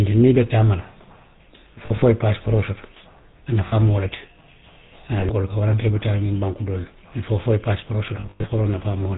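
Throughout, the speech passes through the GSM full-rate codec, whose sound fits its 13 kbps rate. It rebuilds the voice from a vocal-tract model driven by sparse, regular pulses and passes nothing above 4 kHz, so the speech is muffled, buzzy and plainly gravelly.

Lost GSM frames then force the decoder to repeat the last good frame at falling level, giving a rough metallic ring. This happens at 1.86–2.03 s, before "i ye paasipooroo soto" (about 80 ms lost over 160 ms); at 3.68–3.74 s, before "mu wo le ti", which fits two lost 20 ms frames; briefly at 5.20–5.24 s; and at 8.20–8.46 s, after "fo i ye paasipooroo", with 180 ms lost and one gap near a tenth of a second.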